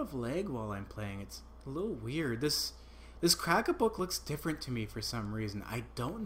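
A single click or tiny skip at about 4.0 s breaks the audio, caused by an overlap between stream segments: two segments' time stamps collided, and trimming that overlap dropped about 12 milliseconds, making the waveform jump.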